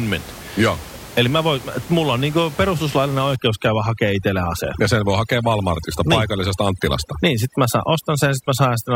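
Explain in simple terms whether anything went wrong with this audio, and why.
Something did go wrong, starting at about 3.36 s and lasting to the end: overdone noise removal. A noise reduction step was set too aggressively, so it shuts off any frequency range that sits close to what it thinks is noise. The quieter parts of the speech get removed along with the room noise. From that point the background drops and breaks up into twinkling, warbling specks.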